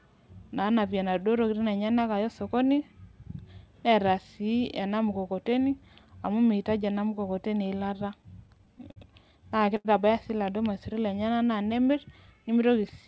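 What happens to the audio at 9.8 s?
A packet arrived late at about 9.76 s, the jitter buffer ran dry, and the receiver had nothing new to play, so this is a short stall from a late packet. It filled the gap by stretching the last stretch of speech for about 82 ms, until roughly 9.87 s, then carried on from the same point with nothing lost. The result is a sound held unnaturally long with a slight buzz or dip, and everything after it lands about 82 ms later.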